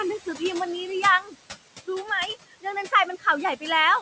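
A short speech recording shows noise suppressor artifacts from start to end. The suppressor pulls the steady background down by about 18 dB, frame by frame. The room noise sits about 17 dB below the speech. The noise rises under the voice and sinks between phrases. At 1.22 to 1.35 s, speech is cut by the noise suppressor. It mistakes a soft stretch of voice for noise and drops it by up to about 11 dB. Roughly 150 ms of speech sounds swallowed and faint.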